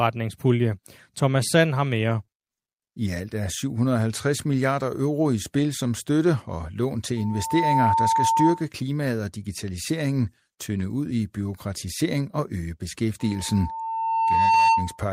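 At 2.25 to 2.31 s there is a short concealed packet loss: about 20 ms of speech never arrived in time, and the receiver covered it by extending the preceding sound, roughly a hundredth of a second of added smear before blending back. A second one follows at 2.94 to 3.01 s, just before "alt er", again a 20 ms hole bridged by guessing. Unlike a dropout, there is no silence, only a brief smear or wobble where the extrapolation stands in for real audio.

Right after, at 3.06 to 3.08 s and still just ahead of "alt er", a lost packet was rebuilt from error correction. Here the next packet carried a low-bitrate copy of the missing 20 ms, so the decoder played a genuine but coarser version of the sound. It is heard as a moment of rough, noisier texture rather than the smeared continuation of the concealed losses, because the content is real, just poorly coded.

From 7.17 to 8.67 s, between "støtte og lån til" and "klimaet og digitaliseringen tynde", a loudspeaker feedback squeal appears: the microphone is re-capturing its own loudspeaker output, and at 901 Hz the loop gain exceeds one. 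The tone swells over about half a second to around 5 dB above the speech. The same 901 Hz squeal returns at 13.19 to 15.01 s, building more slowly over about a second and a half. Its growth from nothing sets it apart from a steady hum.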